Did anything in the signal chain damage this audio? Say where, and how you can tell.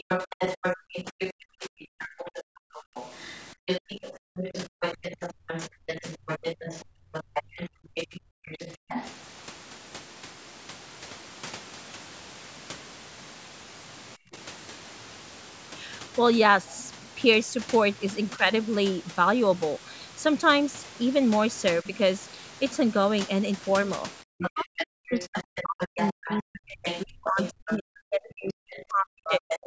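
Yes. The damage happens in call processing. The other side's voice leaking through is heard from 0 to 9.1 s, briefly at 16.74 to 16.91 s, and from 24.38 s to the end. It sits about 10 dB below the talker, and the short burst about 25 dB below. It is likely loudspeaker echo the echo canceller failed to remove.

Speech suppressed in double talk appears as dips in the talker's level while both sides overlap. Long stretches run from 0.28 to 8.86 s and from 24.22 to 29.64 s, dropping by up to about 40 dB. Brief dips of about 10 to 30 dB fall at 14.16 to 14.38, 18.37 to 18.45 and 21.82 to 21.86 s. The canceller likely could not tell the talker from the echo, so it turned both down.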